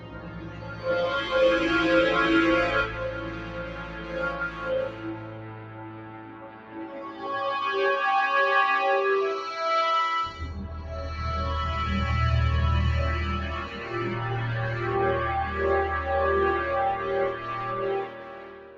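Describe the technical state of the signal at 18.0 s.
Sound cut by the noise suppressor, from 18.01 to 18.77 s: the suppressor judges this passage to be noise and pulls it down by up to about 11 dB, so it sinks. Noise suppressor applied to music or sounds, throughout: a speech-oriented suppressor stays active on these sounds, treating sustained parts as noise, so the level swings by roughly 15 dB and the sound pumps, flutters or thins out.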